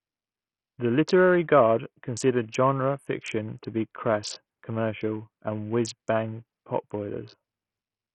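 Right from the start and through the whole speech clip there's a heavily squeezed sound. The treble keeps thinning out and flickering, with gritty noise and an aliased edge. That's likely Bluetooth SBC compression starved of bits, consistent with something as low as 48 kbps.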